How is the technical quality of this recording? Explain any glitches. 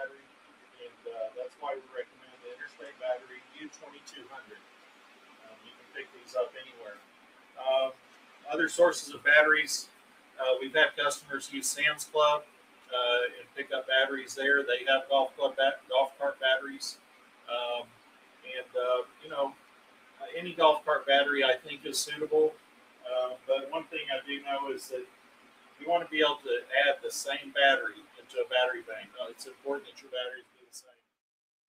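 The technical quality is compromised by a speech-oriented noise suppressor acting on non-speech sound, which leaves the level unstable and periodically pulls material down.

A noise suppressor applied to music or sounds is active across the whole recording, with gain swinging by around 20 dB. Because it treats steady tones, ambience and reverb as noise, sustained material is pushed down while sharp onsets pass. A compressor or gate tracks overall loudness rather than steadiness, so it would not produce this pattern.

Sound cut by the noise suppressor is heard from 0.08 to 8.46 s, 9.87 to 10.38 s, 12.45 to 13.57 s, 15.3 to 20.21 s, 22.55 to 23.48 s, 25.06 to 25.81 s, and 27.98 s to the end. Level drops by about 9 to 10 dB. Held or decaying sound sinks or has its tail cut, while sudden sounds survive, unlike a dropout, which removes everything.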